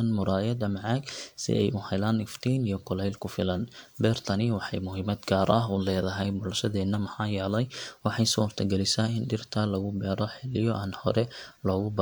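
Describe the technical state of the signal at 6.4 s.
Around 6.4 s, the speech signal is intact, with no dropout, distortion, clipping or other fault affecting it at that moment.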